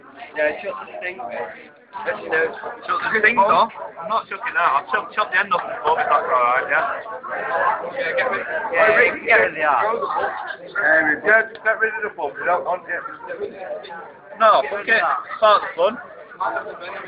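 No technical faults can be heard anywhere in the audio, which stays continuous and intact throughout.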